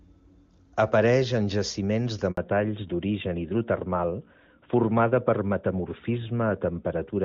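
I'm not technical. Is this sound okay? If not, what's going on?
No, there are two problems, and they happen together. At 2.31 s, right after "en jaciments de", there's a handover gap: the phone switched the call from one network to another, and for about 60 milliseconds nothing came through. The voice cuts out abruptly and comes back at 2.37 s. It's a short dropout, but whatever was said in that moment is lost.

The second problem starts the instant the sound returns, and it's a fallback to narrowband. Up to 2.31 s the call is in HD Voice and sounds clear and full. After the switch, the new link only carries the older, lower-quality type of phone audio, so everything above 4 kHz is missing from 2.37 s to the end. That's why the voice suddenly sounds duller, flatter and a bit rougher, like an old-fashioned phone line, for the rest of the clip.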